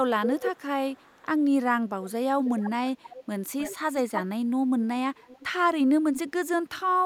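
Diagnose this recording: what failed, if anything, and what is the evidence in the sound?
An echo leak at the call-processing stage, likely from an echo canceller on a loudspeaker end that let part of the returned voice through. A delayed copy of the speech trails the direct sound at 0.21–1.4 s, about 340 ms late and only slightly quieter. It recurs at 2.45–2.71, 3.02–3.25, 3.59–4.22, 5.17–5.48 and 6.15–6.19 s, each about 310 ms behind. Most of these are much fainter, but the 3.59 s one is strong. On a spectrogram the harmonic bands repeat as a shifted ghost copy. The waveform shows matching envelope bumps trailing each burst.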